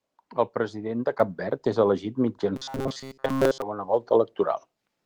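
At 1.2 s the microphone volume steps up: the input gain jumps by about 7 dB in one move, lifting speech and background together. On a waveform the envelope widens abruptly at that point; a spectrogram shows every band brightening at once, including the noise floor.

From 2.56 to 3.62 s, right after "és elegit", the speech turns into a rigid metallic buzz near 134 Hz. This is robotic sound from repeated short buffers, likely from the software looping a roughly 7.5 ms stretch while most real audio is skipped. A spectrogram shows evenly spaced, largely flat harmonic lines; the waveform repeats identical short cycles.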